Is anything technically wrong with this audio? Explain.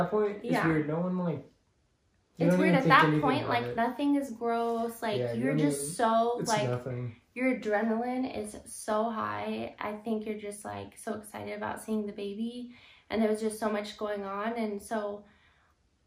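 No, nothing technically wrong can be heard here.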